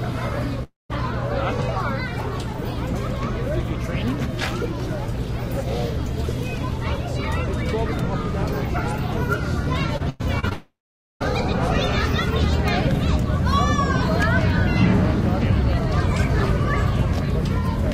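Long network dropout at 0.63 to 0.91 s: the last sound is stretched into a synthetic continuation that dies away into about 160 ms of silence. This is likely a stall in the incoming stream, and about 260 ms of the audio never arrives.

Repeated packet loss (robotic sound) from 9.98 to 10.53 s: four separate holes, the longest 98 ms, are each patched by extending the preceding sound. Roughly a third of the stretch is concealed, so the audio turns choppy and broken, with 160 ms lost.

Long network dropout from 10.53 to 11.22 s, straight after: the concealment fills in, then gives way to about 490 ms of silence. When the sound resumes, around 680 ms is simply absent.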